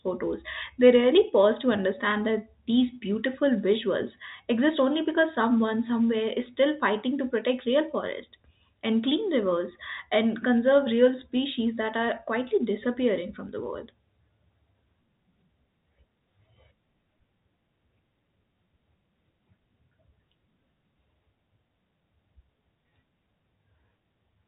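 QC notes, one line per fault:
No fault to note in this speech, so this single line stands in place of one line per fault.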